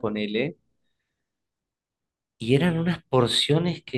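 No technical faults are audible.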